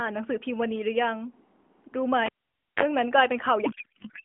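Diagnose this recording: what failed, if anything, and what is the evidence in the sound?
At 2.26 s there is a sharp pop, then the speech drops to near silence for about 0.52 s, broken by a 37 ms burst of 50 Hz mains buzz, and another pop as the sound returns at 2.83 s. This is a cable pulled and plugged in at the analogue wiring stage. The pops are the live connection breaking and remaking, and the buzz is the plug tip touching before the ground engaged.

From 3.66 s to the end, the speech turns into garbled noise and warble that barely tracks it. This is a codec payload misread at the network and codec boundary. The decoder still accepts each frame as valid AMR-NB, which fits octet-aligned AMR being read as bandwidth-efficient. Every parameter field is therefore read from the wrong bit positions, and the vocal-tract model is driven by nonsense values. The speech before this point has the narrow telephone band of AMR at 12.2 kbps.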